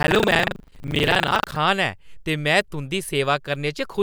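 From the start to about 1.6 s there's buffer tearing: the writer and the hardware reader have slipped, so part of every period, roughly a fifth, is replaced by stale audio from around 70 ms earlier. Those hard joins give a steady robotic rattle at 25 Hz under the speech.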